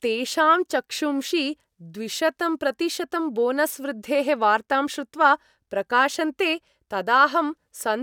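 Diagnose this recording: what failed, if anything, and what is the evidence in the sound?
Nothing failed in this recording, and the sound gives no evidence of a fault at any stage.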